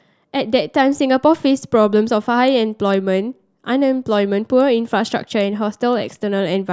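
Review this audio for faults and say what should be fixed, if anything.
No faults heard; nothing here needs fixing.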